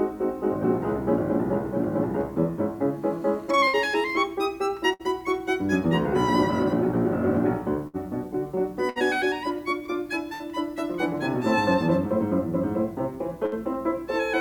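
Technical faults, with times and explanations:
3.67–3.76, 4.93–5.02, 7.87–7.96, 8.89–8.99, 10.34–10.43 and 13.46–13.55 s: burst of packet loss. Each time the music's last sound is stretched and faded for about 60 ms, then playback jumps ahead with about 60 ms missing. A plain dropout would go silent instead.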